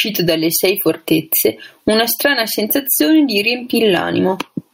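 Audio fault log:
Throughout, gain pumping: the level is pulled down on each loud sound so loud and soft parts end up closer in level and the speech sounds squashed, a swing of around 20 dB, likely from excessive gain driving a fast limiter.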